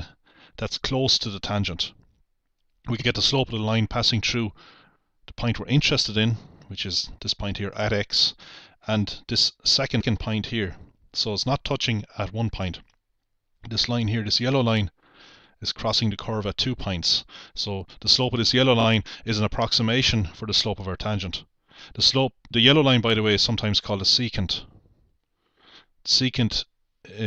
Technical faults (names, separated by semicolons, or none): repeated frames